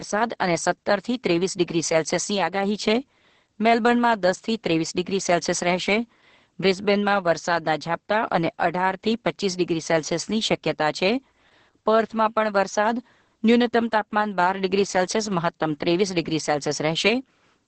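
From the very start, the speech carries heavy Opus voice compression. At about 10 kbps the encoder runs in SILK mode with a wideband setting and 20 ms frames. The linear-prediction coder keeps the spectral envelope and spends very few bits on the excitation. That makes the voice sound muffled, hoarse and faintly robotic. On a spectrogram the energy stops at a flat ceiling near 8.5 kHz, and the harmonics below it look smeared and grainy.

From 0.12 s to 17.67 s a faint, steady rattle of clock slip clicks runs under the speech. It is most obvious on loud, sustained vowels. The ticks come roughly every 50 ms, hundreds of them in all. That steady rate points to two unsynchronised clocks that differ by a few hundred parts per million, with one sample likely dropped or repeated each time the drift adds up to a whole sample. A waveform shows tiny single-sample steps, and a spectrogram shows evenly spaced thin vertical lines.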